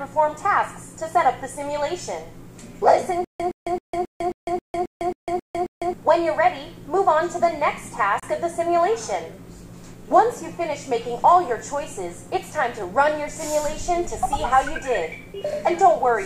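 From 3.25 s to 5.93 s the audio breaks into a stutter with silent gaps. A short fragment of about 117 ms plays, then about 152 ms of dead digital silence follows. The pair repeats ten times at an even 269 ms period. The likely cause is a stalled player or stream that replays its last buffered piece at each retry and then runs dry. Whatever should have sounded in that span never arrives.

At 8.20 s there is a Bluetooth dropout. The sound cuts out for about 29 ms and then resumes. It picks up further along, as though it had kept running during the hole. The likely cause is wireless packets reaching the headphones too late and being discarded, and a gap this long fits about two lost packets. It registers as a brief hole of missing audio.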